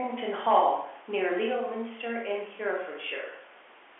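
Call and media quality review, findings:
No faults found.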